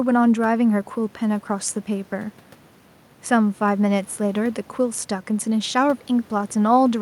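No technical faults are audible.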